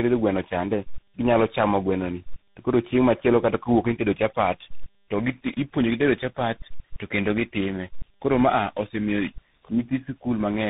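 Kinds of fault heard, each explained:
Tandem speech coding: the speech passes through three different speech codecs in a row, ending in CVSD, each re-coding the last one's damaged output. The speech sounds rough, muffled and warbly throughout. Nothing is heard above 3.8 kHz.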